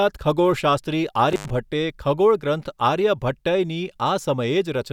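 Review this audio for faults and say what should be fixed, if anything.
Between 1.30 and 1.50 s the speech cuts out with a crackle at each edge, and for about 88 ms only faint hiss remains. This is an intermittent contact: a loose cable or plug briefly opened, breaking the signal path. Reseat or replace the suspect cable and connectors, and secure them with strain relief.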